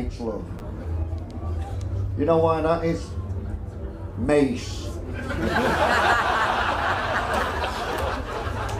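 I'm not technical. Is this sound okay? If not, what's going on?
No. At 0.59 to 0.61 s there's a brief chunks out of order glitch: a 10 ms slice of audio plays one slot late, causing a tiny jumbled moment.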